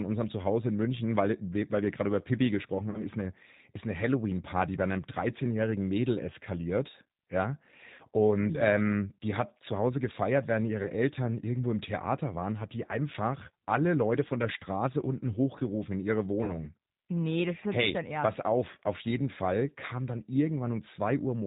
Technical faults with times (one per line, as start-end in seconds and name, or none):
0.00-21.47 G.729 codec
2.90-3.01 VoIP packet loss concealed by the speech codec
7.95-8.02 VoIP packet loss concealed by the speech codec
10.83-10.89 VoIP packet loss concealed by the speech codec
16.44-16.57 VoIP packet loss concealed by the speech codec